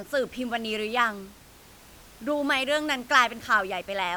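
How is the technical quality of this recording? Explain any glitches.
No glitches can be heard anywhere in this speech recording. The only thing beneath the speech is the room's own background noise, sitting about 25 dB lower.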